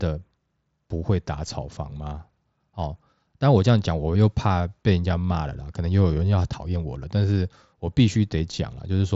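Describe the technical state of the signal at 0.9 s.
At 0.9 s the audio is intact, with no fault present, the speech simply carried through the Bluetooth mSBC headset codec with its band ending at about 7.7 kHz.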